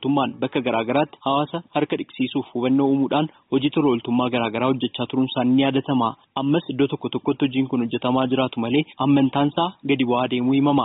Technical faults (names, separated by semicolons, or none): gain pumping